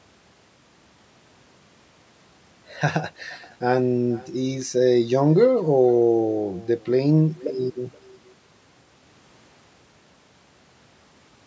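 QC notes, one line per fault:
Throughout: echo with no canceller, the speech returning about half a second later as a faint, thin copy roughly 24 dB down, a delayed repeat rather than reverb tail.
0.16 to 11.44 s: clock slip clicks, faint ticks about ten times a second, likely single-sample slips from mismatched clocks around 300 ppm apart.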